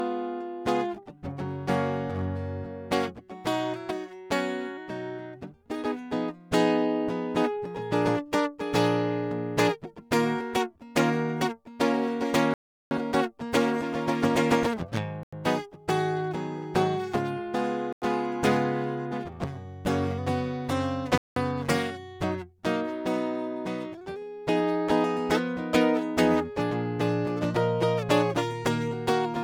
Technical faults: generation loss; block of digital silence

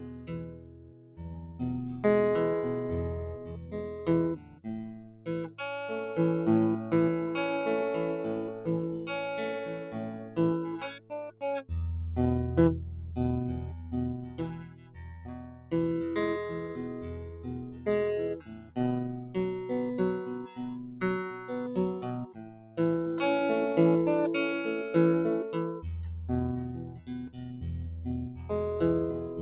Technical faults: noise suppressor applied to music or sounds; sound cut by the noise suppressor

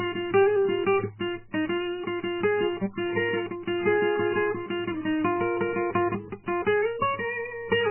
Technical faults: MP3 compression

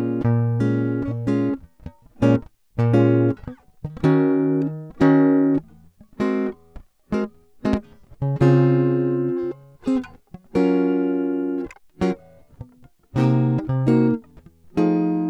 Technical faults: loud pop

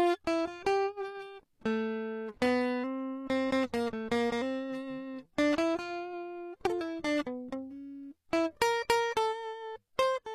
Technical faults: HE-AAC compression

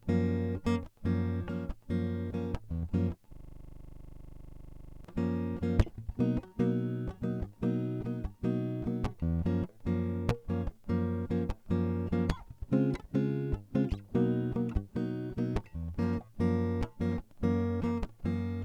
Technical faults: system hang loop

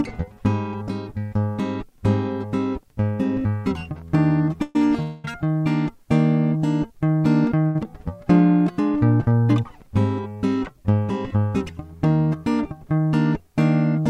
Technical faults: call audio freeze; short stall from a late packet; jitter buffer speed-up

